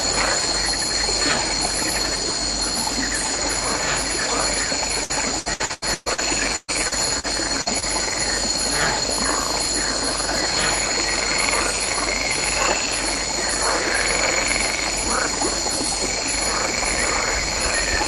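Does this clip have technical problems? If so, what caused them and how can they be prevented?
Yes. Four kinds of packet-loss damage cluster between about 5 and 8 seconds.

Repeated packet loss (robotic sound) runs from 5.03 to 6.20 s. Seven gaps, the longest 120 ms, fall close together. The receiver keeps patching each hole by extending the last sound, so about 40% of the stretch is filler. That gives a choppy texture with pieces missing. Unlike a single burst, the patches recur before the sound can settle. A more stable network path and a deeper jitter buffer would prevent it.

A burst of packet loss hits at 6.56 to 6.70 s, where about 120 ms goes missing, and again at 7.61 to 7.68 s, where about 40 ms goes missing. The concealment stretches the last sound and fades it, leaving a held buzz or fading hiss. The first burst even drops to brief silence. Then the sound resumes further on, with material skipped. 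One isolated run like this, rather than a string of them, marks it as a burst. Reducing congestion spikes or prioritising the audio traffic prevents it.

Short concealed packet loss appears at 6.88 to 6.93 s, 7.19 to 7.25 s and 7.80 to 7.84 s. Each hole is only 20 to 40 ms, filled by continuing the prior sound and then blending back. It is heard as a quick smear or wobble rather than an audible gap or buzz. Lowering packet loss on the link, or enabling forward error correction, prevents it.

A lost packet rebuilt from error correction occurs at 6.91 to 6.93 s and 7.66 to 7.68 s. Opus recovered each 20 ms frame from a low-bitrate copy carried in the following packet. Because the copy is real data, there is no hole, just a momentarily rougher, noisier grain. That roughness is what separates it from concealment. Fewer losses, or a higher error-correction budget, would prevent it.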